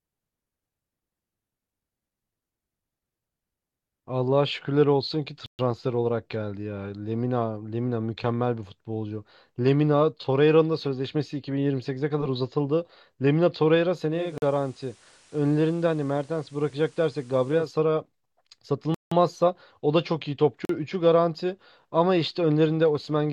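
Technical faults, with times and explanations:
5.46 to 20.65 s, blocks of digital silence: the speech drops to silence four times, at 5.46 s for 128 ms, 14.38 s for 43 ms, 18.94 s for 171 ms and 20.65 s for 43 ms. Each gap starts and ends with no fade. The gaps are heard as short holes, the longer ones more plainly. The 43 ms and 171 ms lengths fit whole buffers of 2048 and 8192 samples at 48 kHz, which suggests the program failed to deliver output blocks in time.
14.08 to 17.80 s, digital radio blending to analogue: the receiver loses its digital signal and cross-fades over about 300 ms to the station's FM broadcast, then returns at 17.80 s. A faint hiss sits about 30 dB below the voice, and the level drops by about 2 dB, making the switch audible at both ends.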